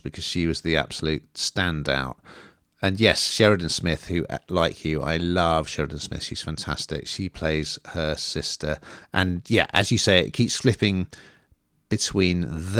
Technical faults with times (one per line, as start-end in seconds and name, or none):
none